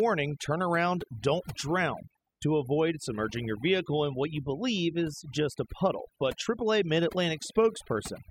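A speech recording suffers from overdone noise removal across its whole length. The noise reducer was pushed too hard, so any frequency band sitting close to its noise estimate is driven down or gated out entirely. The gaps between phrases fall to near silence, broken by twinkling, chirpy specks where isolated bands briefly pass through. Softer parts of the voice are caught by the same process and are stripped away along with the background.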